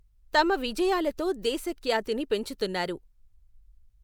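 No technical faults can be heard in this recording.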